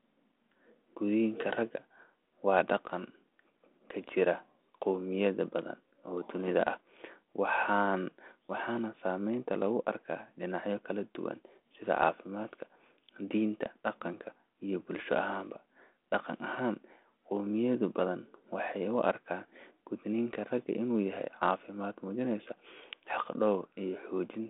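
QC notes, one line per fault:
No faults found in the speech. The G.726 ADPCM link at 32 kbit/s is heard as a telephone band of 250 Hz to 3.5 kHz, with nothing above 3.8 kHz and only a light coding texture.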